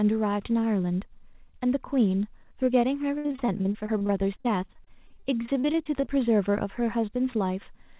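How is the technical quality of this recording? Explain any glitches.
The recording has the narrow, telephone-like sound of a call, with nothing above 4 kHz, which fits a G.711 mu-law codec at 64 kbps. One stretch breaks up.

From 3.18 to 6.08 s the speech turns choppy and robotic, with 30 short holes, the longest 64 ms. This is repeated packet loss: packets kept going missing, and each gap was patched by extending the preceding sound, which covers about 23% of that span.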